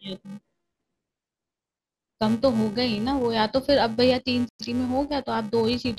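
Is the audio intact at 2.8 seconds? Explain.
No. A filter restarted on every block runs through the whole clip, resetting its state every 128 samples, so each block opens with a tick. This gives a 345 Hz buzz that tracks the speech level, seen as evenly spaced spikes on the waveform and a harmonic comb on the spectrogram.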